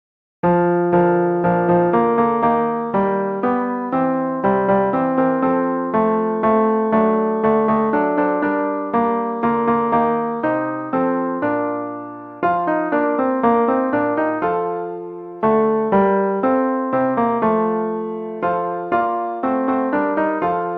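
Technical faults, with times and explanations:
No technical faults are audible.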